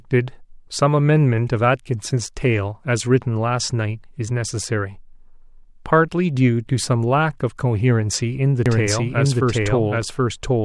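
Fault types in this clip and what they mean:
Doubled audio track: the speech is likely being captured a second time through a slower path, or an edit has left two copies out of step, so the same material is mixed in twice. From 8.66 s to the end, a full-band copy trails the original by roughly 0.7 s at much the same loudness, with no decay or room colour. It cuts in abruptly, making the speech sound stacked over itself.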